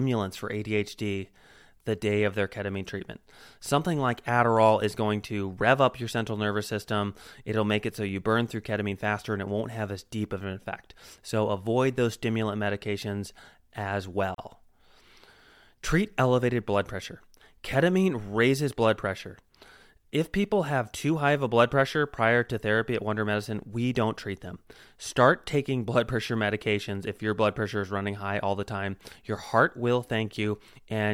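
It's a speech clip with one gap at a join of encoded pieces: at 14.35 s the sound drops out for about 36 ms, until 14.38 s, then resumes right where it left off. Two separately encoded sections were butted together, leaving encoder delay and end padding in as silence.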